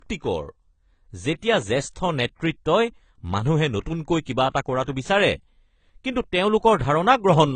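Throughout the speech there is no content above 9.2 kHz, a hard ceiling that the high-bitrate MP3 cannot lift. This is likely low-bitrate audio saved at a high bitrate. The missing band fits an earlier AAC encode near 24 kbit/s.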